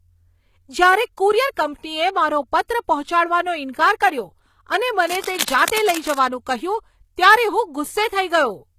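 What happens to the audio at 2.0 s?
At 2.0 s the speech carries plainly audible damage from what is likely HE-AAC compression, present throughout the clip. The treble is rebuilt from copied lower bands rather than the original, stopping at 14.9 kHz, so s sounds turn gritty, metallic or lispy. This fits a bitrate near 20 kbps.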